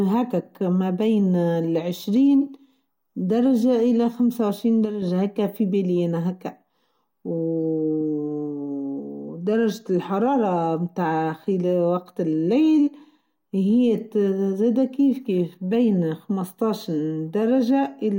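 A channel drops out from 4.85 to 5.02 s, just before "هيكه في بنينه هاكا". For about 0.17 s the speech dips abruptly by about 6 dB and then returns to full level. The likely cause is that one side of the stereo signal went silent for that moment. When the two sides are summed to mono, the material shared by both loses half its contribution, so the level sags. Anything carried only by the missing side vanishes entirely.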